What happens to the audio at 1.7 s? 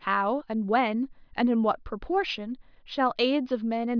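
Nothing goes wrong at 1.7 s: the speech continues intact through that moment, with no dropout, click, distortion or other audible fault.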